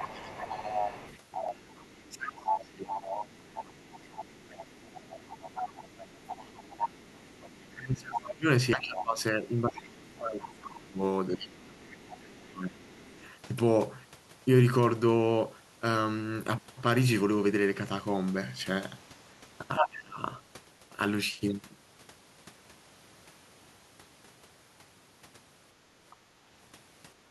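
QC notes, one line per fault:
0.00 to 13.33 s, other side's voice leaking through: a second voice sits under the speech at roughly 10 dB below it. The far end is likely playing on a loudspeaker, and the echo canceller has not removed it from the microphone pickup.
1.49 s, 6.32 s and 8.73 s, dropped buffer (overrun): each is a sudden jump forward in the speech. About a tenth of a second of audio is missing each time. The likely cause is samples overwritten before the program collected them.
2.10 to 3.41 s, 6.49 to 6.53 s, 7.73 to 13.22 s, speech suppressed in double talk: the talker dips while the leaked voice runs, by up to roughly 20, 5 and 25 dB. The longest run covers about four seconds, likely the canceller turning everything down.
19.76 to 19.88 s and 26.10 to 26.16 s, other side's voice leaking through: two short scraps of the second voice. The first is roughly as loud as the speech. 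The second is faint, around 30 dB down. Residual loudspeaker echo is the likely source.
19.79 to 20.18 s, speech suppressed in double talk: the speech drops by roughly 20 dB for about 0.4 s. This overlaps the loud echo scrap. The canceller likely could not separate the two and pulled both down.
27.18 to 27.31 s, background gated by the echo canceller: the room sound dips by about 8 dB for the final 0.13 s. The canceller clamps the microphone hard while the loudspeaker plays, so the background briefly falls away.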